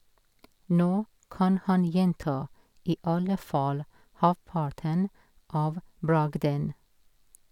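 No faults can be heard anywhere in this speech recording.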